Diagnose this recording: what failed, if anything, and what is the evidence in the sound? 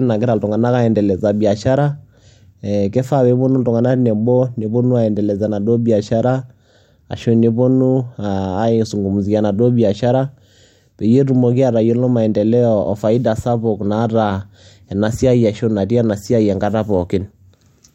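Nothing stood out on listening to the speech in this recording that would point to a failure at any stage of the chain.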